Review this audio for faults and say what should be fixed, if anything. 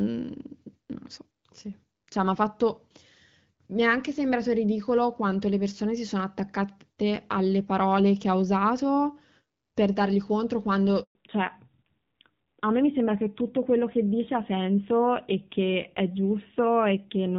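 Right after "usato per dargli contro", the speech fades within a few tens of milliseconds and goes silent from 11.03 to 11.15 s, a 120 ms hole. This is a handover gap: the call switched networks and no speech frames arrived during the transfer. Prevent it by making the handover complete before the old link is released.

From 11.15 s to the end, the speech loses everything above 4 kHz and turns duller and rougher than the lightly coded HD Voice before it. This is a fallback to narrowband: the call dropped from AMR-WB, which sounds consistent with about 12.65 kbit/s, to a low-rate AMR-NB mode. Prevent it by keeping both ends of the call on networks that support the wideband codec.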